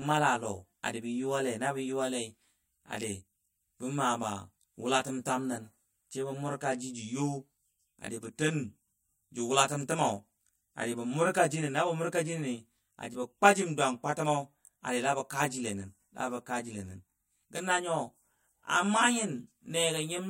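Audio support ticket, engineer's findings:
Channel delay (comb filtering), present throughout. Speech rough, slightly doubled. Likely cause: one channel lagging by roughly 20 ms before mono sum. Common content cancels at evenly spaced frequencies, first notch near 30 Hz. Spectrogram: fixed horizontal dark bands, closely spaced, static across the whole clip.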